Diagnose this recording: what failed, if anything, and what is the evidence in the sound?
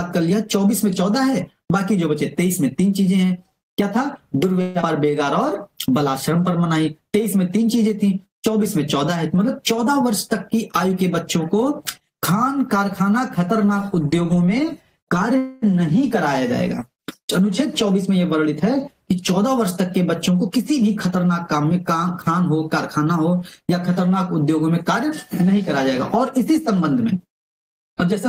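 Network stage. At 4.61 to 4.84 s the last sound is stretched into a fading buzz for 0.21 s. About 0.1 s is then missing, likely a long network dropout.

Jitter buffer. From 4.87 to 6.59 s the sound runs at 95% speed with the same pitch. About 97 ms of repeated periods are added: a jitter buffer slow-down.

Jitter buffer speed-up. Audio runs faster at 9.56 to 10.13 s (109%), 10.54 to 12.46 s (104%), 17.64 to 18.83 s (107%) and 20.49 to 22.07 s (110%). Short periods are cut to shrink the delay.

Network stage. At 15.38 to 15.64 s a fading buzz fills 245 ms. The sound then continues with nothing lost, likely a call audio freeze from packets arriving late.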